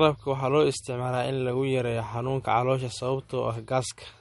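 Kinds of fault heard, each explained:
MP3 compression: The encoder likely ran short of bits, which fits a bitrate near 48 kbps. It zeroed weak frequency lines that flicker between frames and cut the treble, so the speech has nothing above 11.2 kHz and plainly audible watery, swirling artefacts.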